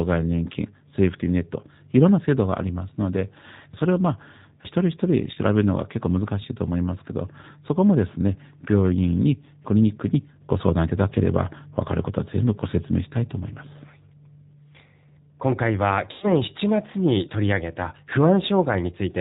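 Speech, carried throughout by the G.729 codec. Its rough, slightly synthetic quality fits an 8 kbit/s coder building each frame from a filter and a few pulses. On a spectrogram, energy stops at a sharp, flat ceiling at 4 kHz, with nothing above it. VoIP packet loss concealed by the speech codec occurs twice. The first is brief, around 5.34 to 5.38 s, and fits a single lost 20 ms packet. The second is longer, from 16.12 to 16.42 s, covering about 100 ms of lost audio, which fits roughly five packets. In both places the decoder keeps repeating its last pitch and filter at falling gain, so the sound smears into a buzzy tone or a coloured noise that fades. The waveform shows a decaying envelope. The recovery stays weak for a moment after each gap.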